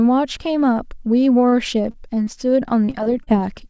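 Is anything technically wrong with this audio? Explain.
Yes. The speech has several transmission faults, heard through a G.722 call path at 64 kbps that leaves nothing above 8 kHz.

A short stall from a late packet happens twice, at 1.49 to 1.56 s and 1.91 to 1.97 s. Each time a packet arrived late and the jitter buffer ran dry, so the receiver held the last sound for about 28 and 30 ms and then resumed where it left off. Little or nothing is lost, which is what separates it from packet loss. The sound is briefly drawn out, with a faint buzz or dip.

A short concealed packet loss follows at 2.24 to 2.30 s. About 30 ms of audio never arrived, and the gap was patched by extending the preceding sound before blending back into the real signal. Unlike the stalls, real content is missing here, so it sounds like a quick smear or wobble rather than a held sound.

Repeated packet loss, with a robotic sound, runs from 2.69 to 3.30 s. 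Five separate gaps, the longest 33 ms, add up to about 120 ms lost, and roughly a fifth of the stretch is concealed. Because the patches come in close succession, the speech turns choppy with pieces missing instead of showing one isolated smear.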